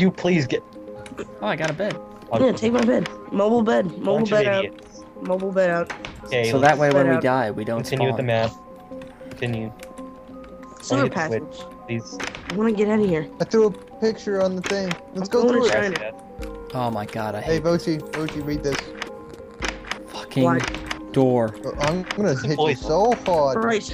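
Nothing stood out on listening.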